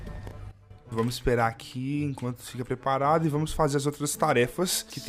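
A sudden gain jump hits at 0.51 s: the level drops by about 13 dB in a single step, stays down until 0.70 s, then snaps back up just as abruptly. The sound and its background noise fall and recover together, which points to a digital gain change applied without a ramp, likely a setting or bit shift switching instantly. On a waveform this shows as a sharp-edged dip in amplitude. On a spectrogram it appears as a uniformly dimmer band across all frequencies for that stretch.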